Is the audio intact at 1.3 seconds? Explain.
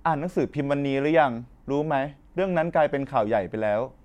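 Yes, at 1.30 s the speech is intact, with no dropout, click, distortion or other fault audible at that moment.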